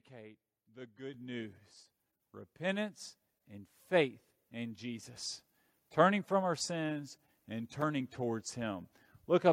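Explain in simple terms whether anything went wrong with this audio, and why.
The microphone volume stepped up twice, at 1.14 and 5.16 seconds, so voice and background jump louder together, first by a large step, then a smaller one.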